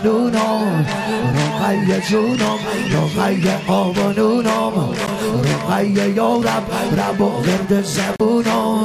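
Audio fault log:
5.07–5.09 s: corrupt frame decoded. A brief chirp-like blip peaking near -10 dBFS. Its length points to a couple of damaged compressed frames that were played rather than concealed, so misread codes put energy at the wrong frequencies.
8.16–8.21 s: corrupt frame decoded. A louder, longer squeak or noise burst reaching about -5 dBFS, consistent with roughly three consecutive bad frames decoded with wrong gains.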